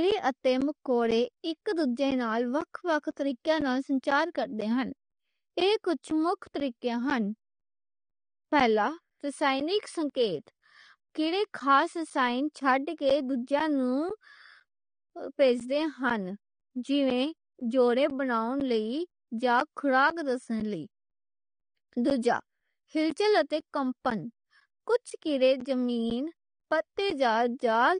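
Speech clip with a dull, smeared sound and nothing above 9.7 kHz, with plainly audible warbly artefacts, likely from AAC compression at a low bitrate. On top of that, periodic USB or driver dropouts put a regular tick every 0.5 s from 0.11 s to 27.61 s, each a silent gap of roughly 10 ms.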